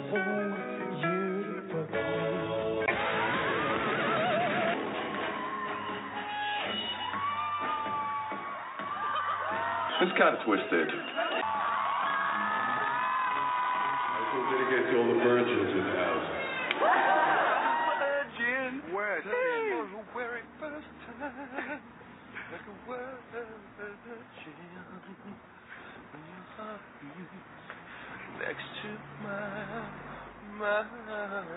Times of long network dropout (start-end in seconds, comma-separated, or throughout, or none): none